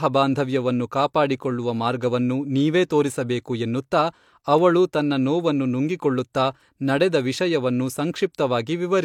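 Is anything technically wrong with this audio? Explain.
Yes. At 6.33 s a brief hiss arrives just ahead of a sharp onset in the speech, and the attack itself sounds softened and smeared. This is pre-echo: a transform codec spread coding noise across its whole block, so noise meant for the loud attack leaked about 19 ms into the quiet moment before it.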